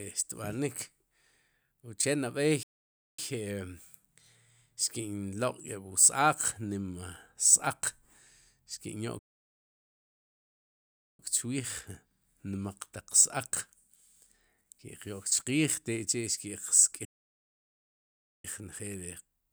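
Speech with three playback stalls: after "uche nab'ey" at 2.63 s, the sound halts for 0.55 s; again at 9.19 s for 2.0 s; and at 17.05 s for 1.39 s. Each is dead silence mid-flow, likely from the player starving for data or a blocked thread. Unlike a short dropout or a deliberate pause, these gaps are long, land abruptly mid-phrase, and the speech then carries on.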